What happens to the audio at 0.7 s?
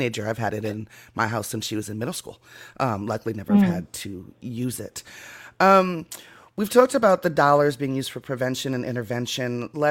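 Between 0.65 and 0.73 s, right after "I've had it" and before "my house since she", the speech is interrupted by a corrupt frame decoded fault. Damaged bits in roughly three consecutive compressed frames were decoded as if valid, so misread gains and codes put energy at the wrong frequencies, producing a brief error peaking around -20 dBFS. Unlike a dropout or concealed lost frame, the sound doesn't smear; it turns into a chirp, squeak, blip or burst of noise.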